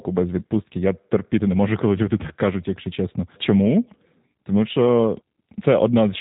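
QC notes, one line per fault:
Throughout, G.729 codec: the speech has the thin, band-limited sound of this low-rate VoIP coder, and the damage is plainly audible. Nothing above 4 kHz comes through, so sibilance and air are gone. The coder rebuilds each 10 ms frame from a vocal tract filter, a pitch predictor and a handful of pulses rather than the actual waveform. That's where the rough, synthetic edge on the voice comes from, and it fits an 8 kbit/s stream.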